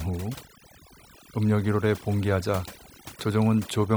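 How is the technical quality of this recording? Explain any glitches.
The recording is marred by overdone noise removal that runs through the whole clip. Between phrases the background drops and breaks up into twinkling, warbling specks. A noise reduction stage set far too aggressively is cutting individual frequency bands hard whenever their level sits close to its noise estimate, so the quieter parts of the speech are stripped out along with the noise, leaving scattered tonal fragments behind.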